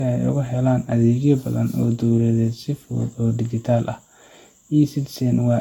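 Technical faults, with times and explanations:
throughout: generation loss. The speech sounds swirly, hollow and smeared, with blurred attacks and nothing above 17.3 kHz, worse than one pass near 70 kbit/s would explain. Likely repeated lossy encoding, about four passes, each re-quantising on a shifted frame grid.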